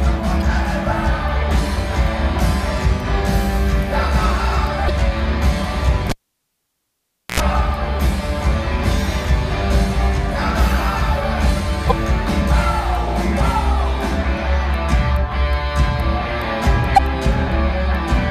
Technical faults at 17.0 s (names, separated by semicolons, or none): damaged data in a compressed stream